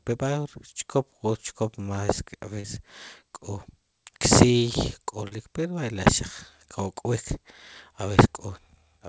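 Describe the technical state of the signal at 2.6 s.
Around 2.6 s there's a short concealed packet loss, from 2.60 to 2.67 s. About 40 ms of the call arrived too late, so the receiver papered over the gap by extending the preceding sound and easing back in, leaving a quick smear or wobble on the G.722 stream.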